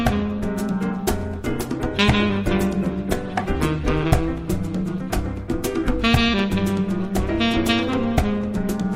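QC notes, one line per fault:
1.50–3.85 s, call bitrate drop: the sound turns rough and muffled, with a watery, smeared texture and the top end dulled, staying degraded for about 2.3 s before clarity returns. The call's bandwidth estimate fell and the encoder was pushed to spend far fewer bits, consistent with a fall from around 96 kbps to about 17 kbps. Coding that coarsely strips detail and cuts the high frequencies until the rate recovers.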